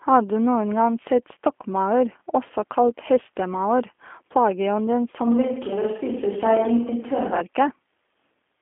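From start to finish the speech sounds thin, slightly rough and synthetic, with nothing above 3.5 kHz and a telephone-line band of roughly 250 Hz to 3.4 kHz. This is G.729 codec damage, and it is plainly audible. The character fits an 8 kbit/s G.729A coder. It rebuilds each short frame from a vocal tract filter, a pitch predictor and a few pulses, so fine detail and high frequencies are discarded.

At 5.27 s, right after "også kalt hestemaur plageånden", the voice abruptly turns roomy and hollow and loses bass. A faint bed of room noise rises well below the speech, and the level barely changes. At 7.40 s the closer sound returns just as suddenly. The most likely cause is a switch to a distant microphone: the close microphone's signal dropped out or went unused for those two seconds, and a farther pickup filled in.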